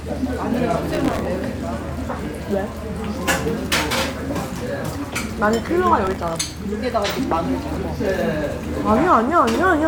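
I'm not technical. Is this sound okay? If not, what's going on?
No. There's processor overload crackle at 0.91 to 1.25 s and 6.05 to 6.47 s: the computer fell behind, repeatedly replaying tiny old scraps of sound, causing gritty bursts.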